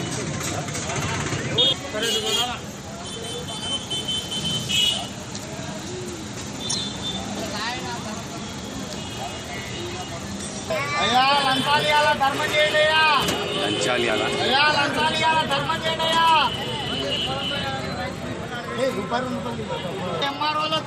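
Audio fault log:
6.69–6.75 s and 15.56 s, corrupt frame decoded: a short chirp-like burst of misplaced energy, about three frames long and peaking near -10 dBFS at 6.69 s, and a briefer, quieter blip of about two frames near -20 dBFS at 15.56 s. Damaged compressed data was decoded anyway, so wrong gains and misread codes land energy at the wrong frequencies. Unlike a dropout, nothing goes missing and the timing stays intact. The fault is an added foreign sound lasting about the length of the affected frames.
6.94 s and 14.1 s, dropped buffer (overrun): an abrupt jump forward in the sound and no silence. Around 50 ms is lost at 6.94 s and around 20 ms at 14.1 s. The likely cause is that the capture side failed to collect its samples before the hardware overwrote them, so the material on either side is butted together. What separates this from a corrupt frame is the missing stretch and the discontinuity at the join, not a burst of wrong-frequency energy.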